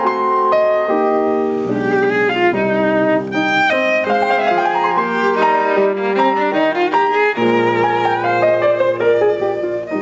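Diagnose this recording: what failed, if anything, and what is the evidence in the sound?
Input gain was set far too high at the capture stage, likely with a fast limiter. Throughout the music, the gain swings by around 10 dB: gain pumping.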